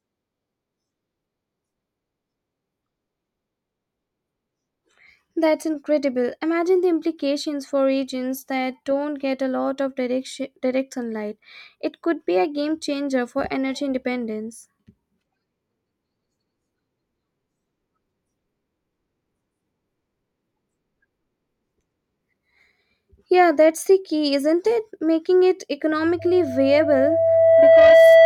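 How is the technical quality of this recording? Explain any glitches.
The recording has one clear fault near the end. At 26.19 s, loudspeaker feedback squeal begins and runs to the end. A steady tone near 659 Hz swells over about a second and a half, ending about 10 dB above the speech. The microphone is picking up its own loudspeaker, and at that frequency the loop gain exceeds one.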